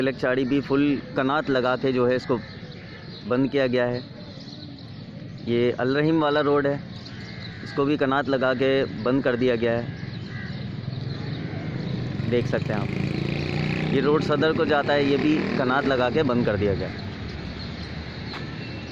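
No technical faults can be heard in this audio, so there are none to describe in time order.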